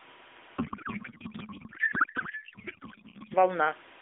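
A constant, even hiss sits under the speech from the very start, roughly 25 dB below it and free of any gritty distortion. This is low bit depth with dither: the signal was rounded to very few levels, consistent with about 7 bits, and the added dither turns the rounding error into steady white noise.

From 0.58 s to 3.35 s the speech gives way to garbled noise and warble that barely tracks it. This is a codec payload misread in the AMR narrowband stream. Octet-aligned frames were unpacked as bandwidth-efficient, so the decoder pulled its parameters from the wrong bit positions until the formats agreed again.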